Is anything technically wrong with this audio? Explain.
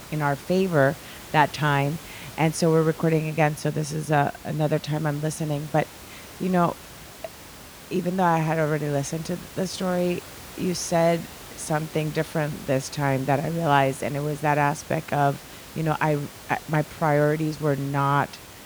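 No, nothing's wrong here technically; the only thing you'll notice is some background noise from the room, sitting about 19 dB below the speech, which is just part of the recording.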